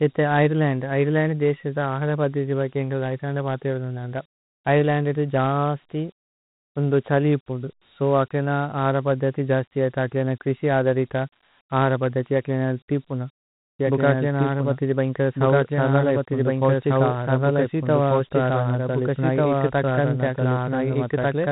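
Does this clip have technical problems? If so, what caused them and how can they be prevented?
Yes. The whole clip carries Dialogic VOX ADPCM damage. Nothing is present above 3.9 kHz, and a gritty hiss rides on the speech. The rate points to 32 kbps, which fits 4-bit OKI ADPCM at 8,000 samples a second. Each sample is coded as a coarse step from a predicted value, so the quantisation error stays audible as grit. To prevent it, capture or archive in linear PCM or a wideband codec rather than telephony VOX format.

From 13.79 s to the end, right after "അഹര പദ്ദിഥി അകിലേന തിപുന", a doubled audio track appears. A full-band copy of the speech enters abruptly, roughly as loud as the original and about one and a half seconds behind it, with no decay or room colour. The likely cause is a second, slower capture path feeding the same mix, or an edit that left two offset copies overlapping. To prevent it, monitor for duplicate routes and mute or remove any redundant feed before recording or export.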